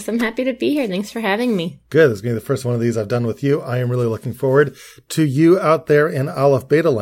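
No technical faults are audible.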